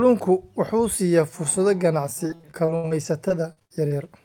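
From 2.27 to 4.06 s the speech shows repeated packet loss with a robotic sound. About a dozen short holes, the longest 78 ms, are filled by stretching the preceding sound, covering a fifth of that span and giving a choppy texture.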